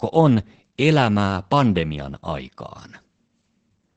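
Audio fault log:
Throughout: Opus voice compression. The speech is muffled and slightly hoarse, with nothing above about 8.6 kHz. This fits wideband SILK linear-prediction coding at a low bitrate near 12 kbps, where the coarse excitation gives a faintly robotic grain.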